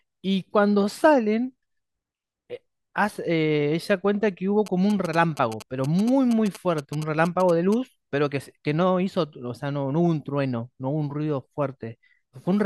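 Speech carries GSM signalling bursts from 4.66 to 7.74 s: a galloping ticking buzz at 217 Hz, rectified radio pulses from a nearby 2G phone, around 15 dB below the speech, seen as clustered vertical spikes and evenly spaced harmonic lines.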